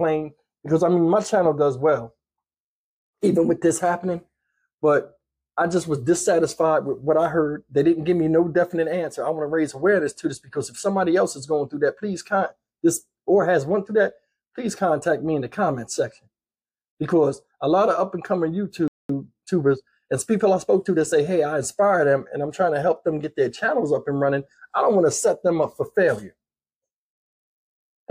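At 18.88 s the sound cuts out mid-flow and stays silent for about 215 ms, until 19.09 s, before picking up again. This is a playback stall: the gap most likely comes from the player running short of data or having its output thread held up, so nothing reached the output until it recovered. The break is abrupt on both sides, with the audio simply halting and then carrying on.

From 19.09 s to 21.23 s the audio sounds hurried, running at about 1.1 times normal speed while keeping its original pitch. This is time-compressed catch-up. Having fallen behind during the stall, the player trims its backlog by removing short slices of audio and cross-fading across the joins. Normal pacing returns once the player has caught up.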